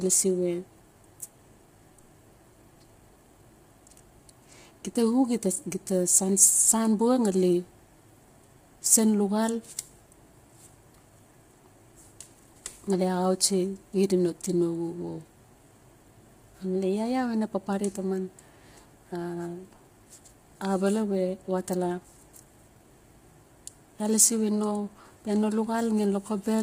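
Speech clip, affected throughout. The voice sounds rough and grainy, with noise between harmonics and nothing above 15.6 kHz. Likely heavy low-delay AAC compression, fitting AAC-ELD at about 24 kbps.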